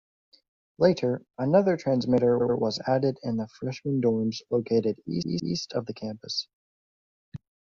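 At 2.37 s, after "another transmitter", and 5.18 s, after "the freshman dorms located", repeated frames replay the same 85 ms, then 171 ms, chunk twice more. The stutter adds time, where a dropout would leave the length unchanged.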